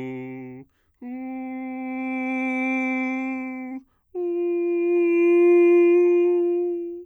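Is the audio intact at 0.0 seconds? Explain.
Yes, the music is intact at 0.0 seconds, with no fault present at that moment.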